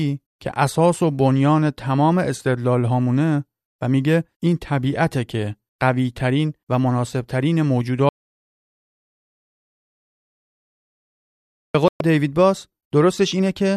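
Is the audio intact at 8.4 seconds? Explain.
No: an audio dropout to silence runs from 8.09 to 11.75 s, likely a lost input written as silence, so the speech cuts off abruptly for 3.65 s. The waveform is a flat line, the spectrogram blank.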